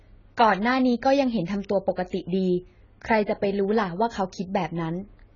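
Speech, and the whole thing has that dull, smeared, warbly quality, with sibilants going fizzy and nothing at all above about 7 kHz. That's likely AAC compression at a very low bitrate, somewhere around 16 kbps, heavily damaging the audio.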